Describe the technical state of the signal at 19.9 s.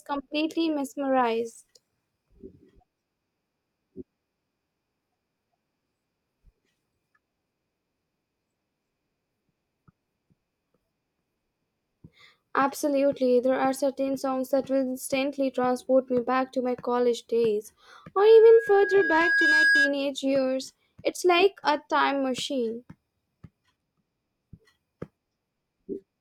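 Loudspeaker feedback squeal, 18.17–19.97 s: the microphone re-amplifies its own loudspeaker, so a 1.6 kHz tone swells over roughly a second and a half, ending about 5 dB above the speech.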